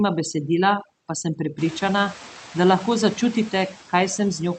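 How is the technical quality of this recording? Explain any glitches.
The quality is compromised by two processing faults that run through the whole speech clip. The room's background noise climbs sharply around a second and a half in and then sits roughly 19 dB below the speech. Over that noise, the call audio tops out near 8 kHz, which points to a wideband call codec.

Overdone noise removal is present from start to finish. The noise reduction was pushed too hard for a recording this noisy, so any frequency band that came close to its noise estimate was driven far down or shut off entirely, including the softer parts of the voice that overlap the noise. The background between phrases collapses toward silence dotted with twinkling specks.

Noise suppressor artifacts also persist throughout. The suppressor works frame by frame, pulling down each band it judges to be steady noise, but here it only takes off about 3 dB. 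The noise dips in the gaps and swells back up underneath the talking.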